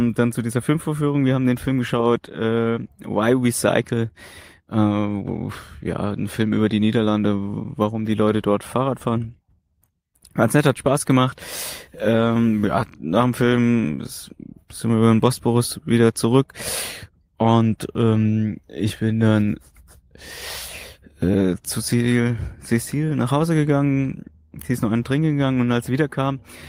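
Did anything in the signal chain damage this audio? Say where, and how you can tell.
No, nothing in the signal chain damaged this audio.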